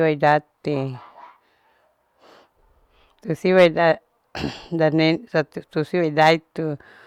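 Hard clipping hits three speech peaks: 0.27 to 0.33 s, 3.58 to 3.66 s and 6.22 to 6.31 s, overdriven by about 1, 5 and 4 dB. The peaks exceed what the stage can pass and are cut flat. The added high harmonics give a brief crackle, harshest at 3.6 s.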